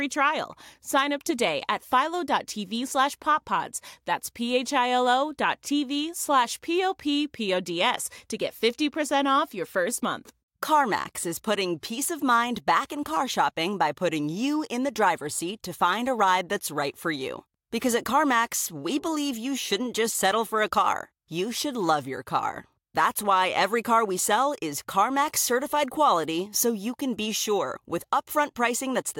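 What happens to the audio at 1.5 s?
Nothing goes wrong at 1.5 s; the speech there is intact.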